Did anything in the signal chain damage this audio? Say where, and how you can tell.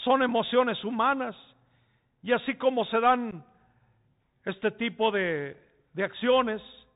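Yes. At the codec stage, a Bluetooth CVSD headset codec runs throughout, consistent with a 64 kbps link. Nothing passes above 4 kHz, s sounds turn scratchy, and granular hiss sets it apart from simple band-limiting.

On the wireless link, unconcealed Bluetooth headset packet loss leaves a hard-edged hole from 3.31 to 3.34 s, about 11 ms, likely a few lost packets. The speech resumes briefly quieter, unlike a smoothed concealment gap.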